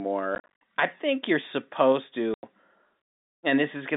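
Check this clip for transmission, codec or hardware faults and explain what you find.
The speech has one kind of fault, packet loss filled with silence, occurring twice over a narrowband G.711 telephone line. From 0.35 to 0.48 s, just before "I think you're supposed", about 160 ms of sound vanishes in scattered holes, the longest about 50 ms. At 2.34 to 2.43 s, right after "I think you're supposed", a 90 ms gap follows. The gap lengths fit 10 ms packets that never arrived, with the receiver inserting silence. Because the sound cuts to dead silence with hard edges, this is not concealment, which would smear or repeat sound across the holes.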